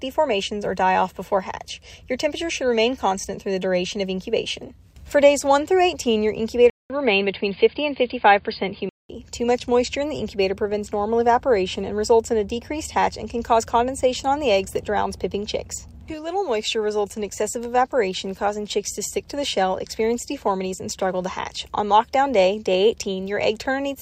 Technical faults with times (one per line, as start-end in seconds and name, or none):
6.70-9.09 input switched to a poorer device